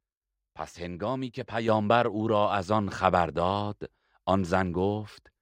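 A speech recording in which the whole signal, voice and background together, jumps up in level at 1.68 s, by about 6 dB. This is a microphone volume stepped up fault: the call software judged the input too quiet and raised the device's input gain in a single step rather than gradually. On a waveform the envelope widens abruptly at that instant, and a spectrogram shows every band, including the noise floor, brightening at once along a vertical boundary.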